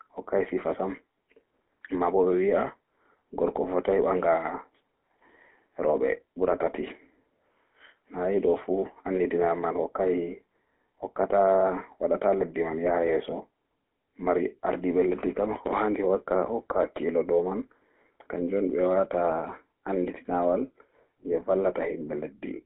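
From start to finish the speech carries the roughness of the GSM full-rate codec, with a bitrate that fits the 13 kbps of that first GSM codec. The codec rebuilds each voice from a vocal-tract filter driven by a sparse, evenly spaced pulse train, so every voiced stretch sounds plainly buzzy and gravelly. The band runs from about 250 Hz to 3.5 kHz, and a spectrogram shows a hard ceiling with nothing above 3.9 kHz, plus coarse, smeared harmonics.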